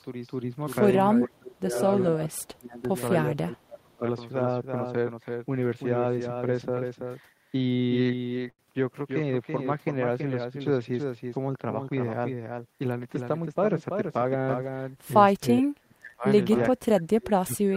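It's a speech clip with a doubled audio track running the whole way through: a second, full-band copy sits roughly 300 ms behind the original at a fairly steady level about 5 dB down, with no room colour on it, so everything has a hard slapback. It's likely a second capture path or an edit holding two copies out of step. There's also speech suppressed in double talk at 1.17–1.77, 2.09–2.95 and 3.31–4.03 s, where the talker dips by about 25 dB, and again at 15.59–16.26 and 16.71–17.76 s, where it drops deeper, about 40 and 35 dB. That pattern is likely an echo canceller ducking everything while both sides talk. Between 7.57 and 8.62 s there are repeated stalls (stutter): six small hangs where the last sound is stretched, about 157 ms in total and the longest 94 ms, so the speech drags and stutters but nothing is actually lost.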